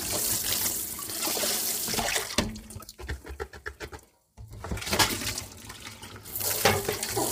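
An everyday sound recording, heavily damaged throughout by low-delay AAC compression, likely AAC-ELD at a low rate near 24 kbps: short frames smear tonal detail into grainy roughness. A spectrogram shows noise filling gaps between harmonics and a thin, patchy top band.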